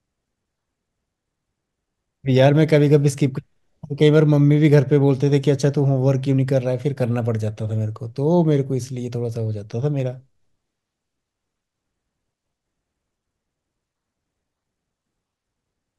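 A speech recording with one glitch: a repeated buffer at about 3.44 s. The output device didn't get fresh audio in time, so it replayed its last chunk twice more, three back-to-back copies of a roughly 1.5 ms slice with hard joins. At that size the repeat comes across as a tiny click or buzz rather than a stutter, and it fits a 64-sample buffer. Hardly any audio goes missing around it.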